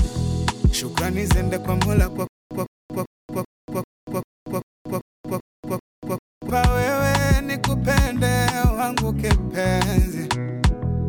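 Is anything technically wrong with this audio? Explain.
Yes. From 2.27 to 6.50 s, one 157 ms burst repeats 11 times, each followed by 234 ms of digital silence, a steady 391 ms cycle. This stutter with silent gaps is likely a stalled stream replaying its last fragment per retry, so the intended audio is lost.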